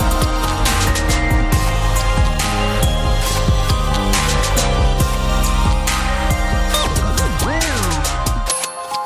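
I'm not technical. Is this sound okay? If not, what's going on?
Yes, this sound is okay. There is nothing in it that needs fixing.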